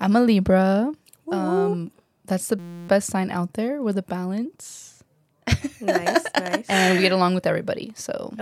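From 2.59 to 2.89 s the speech gives way to a steady buzz at 172 Hz. This is a system hang loop: the system froze while the sound hardware kept replaying one 5.8 ms slice, which fits a 256-sample buffer, some fifty times over.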